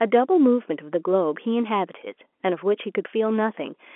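No faults are audible; the speech sits in an ordinary telephone band topping out near 3.8 kHz, which is just the G.711 mu-law line doing its normal job.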